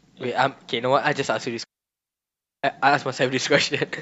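At 1.64 s a digital wireless dropout mutes the speech for about one second, to 2.64 s. The receiver lost its data and muted cleanly, leaving near silence without noise bursts.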